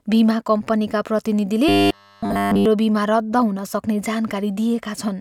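A speech recording in which, from about 1.69 to 2.66 s, the voice collapses into a rigid, metallic buzz pitched at a steady 100 Hz, still loosely tracking the shape of the words. This is robotic sound from repeated short buffers: audio was likely arriving too late, so playback kept looping the last chunk instead of real signal. Practically all of that stretch is repeated material, and the 100 Hz buzz fits a chunk of about 10 ms.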